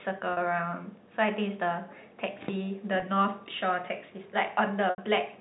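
Brief buzzy, held tones at 0.33 to 0.37 s, 3.0 to 3.02 s and 4.9 to 4.98 s, the last fading toward silence: packet loss with pitch repetition, the receiver looping the last pitch period to bridge each gap.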